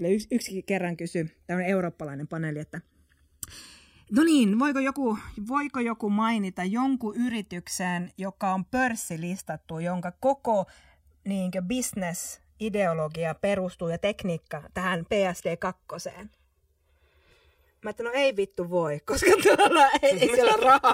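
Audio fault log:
throughout, channels drifting apart: the two channels ran on separate clocks differing by something like 100 ppm, so their offset creeps up to around 2 ms by the end. Summed to mono, comb notches glide slowly through the spectrum, heard as slow flanging over the speech.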